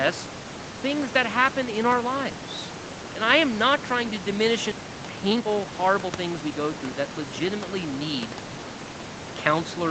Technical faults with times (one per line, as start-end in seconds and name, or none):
4.71-4.73 skip ahead
4.81-6.60 jitter buffer speed-up